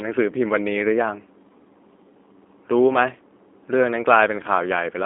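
From start to finish the speech has been through a G.729 codec, the low-rate VoIP coder, and the damage is plainly audible. It doesn't keep the waveform. It sends a vocal tract filter, a pitch predictor and a few pulses per frame, and the decoder rebuilds speech from those. The result sounds a bit rough and synthetic, which fits an 8 kbit/s stream. The band sits roughly between 250 Hz and 3.5 kHz, and nothing comes through above about 3.6 kHz.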